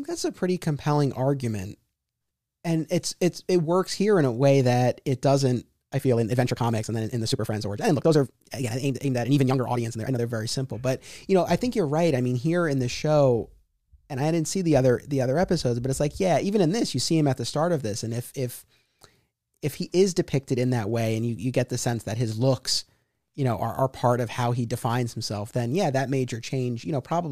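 A time-stretched section runs from 5.92 to 10.20 s, starting just after "way that it doesn't" and ending before "very simple but you". For those four seconds or so the speech suddenly plays about 1.53 times faster while its pitch stays put, so it sounds rushed. The likely cause is software squeezing that stretch to fit a shorter slot, keeping pitch by dropping short pieces of the sound.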